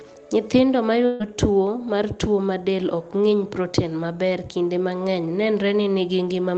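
From 1.05 to 1.22 s, just before "tuwo mar tuo ma", there is a burst of packet loss. About 140 ms of speech never arrived, and the receiver filled the hole by stretching the last sound it had and letting it fade. The result is a brief fading smear rather than silence. That fill is what separates it from a plain dropout. When speech returns, it has skipped ahead. The surrounding audio carries the band-limited, coded sound of an Opus call path with content up to about 8 kHz.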